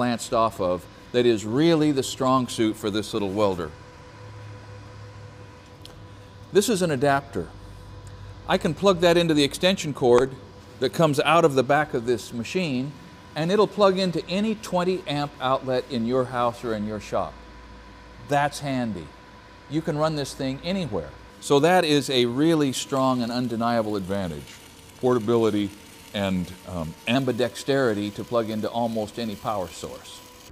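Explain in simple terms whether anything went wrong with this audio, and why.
From 24.06 s to 27.15 s there is a wrong sample rate fault: the sound plays at about 0.92 times normal speed and drops roughly 1.5 semitones, which fits 48 kHz audio being played back at 44.1 kHz without conversion.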